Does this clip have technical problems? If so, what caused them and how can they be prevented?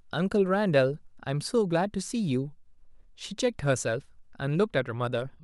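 No, nothing in this speech recording points to a technical fault, so there is no cause to trace and nothing to prevent.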